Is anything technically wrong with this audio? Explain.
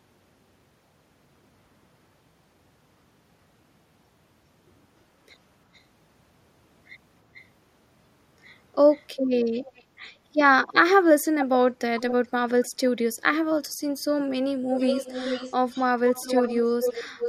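Yes, there is echo leak in this speech, heard at 5.74–5.81, 7.34–7.45, 8.91–9.05, 9.53–9.83, 11.2–11.46, 11.99–12.27 and 12.64–12.68 s, and from 14.74 s to the end. A faint, delayed copy of the voice trails it by about 411 ms, with the lag stretching to 445 ms. The level rises from barely audible to about 10 dB below the speech at 11.2 s and 12 s, and to nearly equal level over the final stretch.

The likely cause is a far-end loudspeaker whose echo canceller let its microphone pickup back into the call. On a spectrogram the harmonics appear twice, the fainter copy offset later in time. In the waveform, the final section shows overlapping envelopes.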